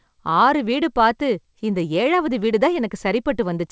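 Nothing goes wrong anywhere in this bit of speech; it just sounds like an ordinary call, with nothing above 8 kHz, which fits a wideband call codec.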